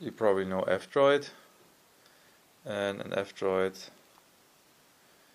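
No technical faults are audible anywhere in the audio.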